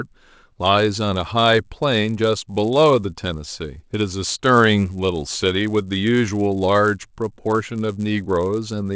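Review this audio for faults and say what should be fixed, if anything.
A buzz at 100 Hz runs through the whole speech clip. It comes from a resampler restarted on every block. The conversion from 48 kHz to 16 kHz was done on 10 ms blocks separately, so each block edge had missing neighbouring samples and carries a small error. Unlike mains hum, the buzz stops in pauses and returns only with signal. Keep the resampler's filter state across blocks so it converts one continuous stream.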